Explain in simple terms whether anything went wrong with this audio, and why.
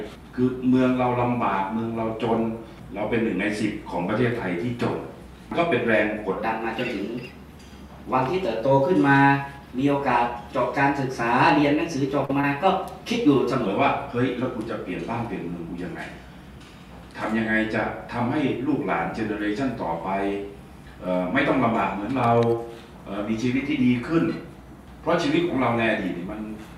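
Section at the wrong speed, from 6.38 to 13.66 s: this stretch plays 1.12 times faster than the rest, so it sounds hurried and roughly two semitones higher. Speed and pitch rise together, most likely because that part was played or edited against the wrong clock.

Short concealed packet loss, at 12.25 to 12.31 s and again at 12.41 to 12.45 s: about 40 ms and then 20 ms of audio never arrived. The receiver papered over each gap by stretching the preceding sound, leaving a brief smear or wobble.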